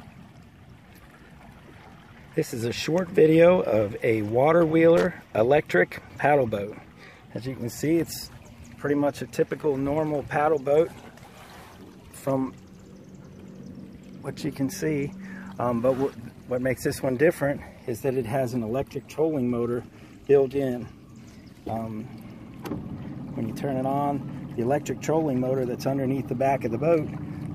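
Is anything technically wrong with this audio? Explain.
Yes. Loose connector crackle appears from 4.97 to 5.06 s. A worn or dirty contact intermittently makes and breaks as it shifts, chopping the signal and adding clicks from any DC on the line, so a short, ragged burst of scratchy crackle breaks through the sound.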